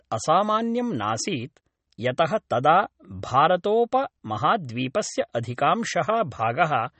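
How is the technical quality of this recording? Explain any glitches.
Quality's pretty rough: the speech is band-limited and watery the whole way through. That's likely MP3 compression at a low bitrate, something like 32 kbps: nothing above 8.4 kHz, and weak detail swirling in and out between frames.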